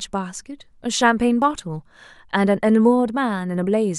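At 1.42 s the speech has a tiny skip where a few milliseconds of sound, about 6 ms, are simply missing. This is an overlap between stream segments: at a segment boundary the time stamps of two adjoining segments claimed the same span, and playback discarded that span as if it were duplicated, although the sound there was not repeated. The waveform jumps across the gap, producing a small discontinuity heard as a tick or tiny skip.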